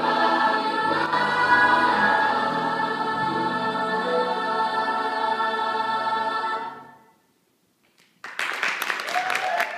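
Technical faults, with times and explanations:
1.06–1.13 s, one channel drops out: for about 70 ms the level falls abruptly by about 6 dB and then snaps back, with no fade either way. The likely cause is one stereo channel briefly vanishing before the two are summed to mono, which halves whatever both channels shared. Unlike a full dropout, the sound never goes silent, and unlike a smooth gain dip, the step is instant and lands on exactly half amplitude.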